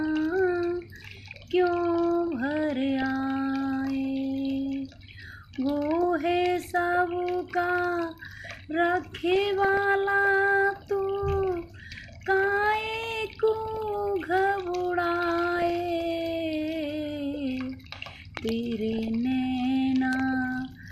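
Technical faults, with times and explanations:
Throughout: MP2 compression. The whole clip has a dull, plainly gurgling quality with a grainy edge on the sound, and the top end comes and goes as upper bands drop out and return. That's likely Layer II coding at a low rate, something in the region of 80 kbps. At that rate there aren't enough bits to keep all 32 sub-bands alive, so the highs get switched off and the remaining bands are coarsely quantised.
1.23 to 1.48 s, 3.02 s, 9.00 to 9.77 s, 13.66 to 13.82 s, 15.56 to 15.70 s and 18.92 to 19.08 s: DAB burbling. Each of these is a short patch of burbling over the programme, and the one around 9 s is the longest at about three quarters of a second. It's what weak reception does when a small fraction of a percent of bits come through wrong past the error correction. Corrupted samples put short blips of noise in single sub-bands, and corrupted scale factors make sub-bands jump in level for up to a frame.
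18.37 to 18.51 s and 20.13 to 20.22 s: loud pop. Each spot has a pair of sharp pops in quick succession, sitting on top of the sound, which carries on underneath. The first pair peaks at about 15 dB above the programme and the second at about 10 dB. They sound like sudden voltage steps, the kind a switch, plug or static discharge would produce, with the downstream circuitry shaping each pulse.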